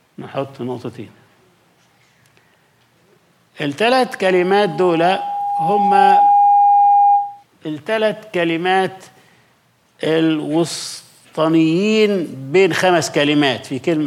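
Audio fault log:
4.25–7.44 s, loudspeaker feedback squeal: a single tone near 813 Hz swells over roughly two seconds to about 5 dB above the sound, as the microphone re-amplifies its own loudspeaker. Unlike a steady hum or whistle, it grows by itself before stopping.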